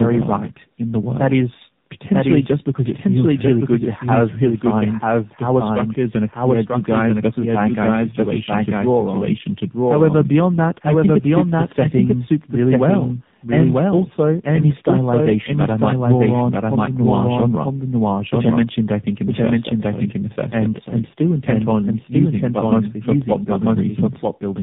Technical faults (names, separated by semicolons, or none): doubled audio track; tandem speech coding